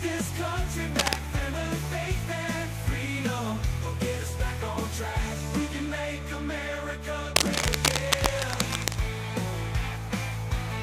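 Two bursts of cable scratch noise show up, one from 0.97 to 1.21 s and a longer one from 7.36 to 8.96 s. Both are dense, ragged crackling and rustling, roughly as loud as the sound itself, so they sit right on top of it. The likely cause is a worn cable, plug or pot being handled, with its contact resistance jumping around and spraying uneven noise into the signal while it moves.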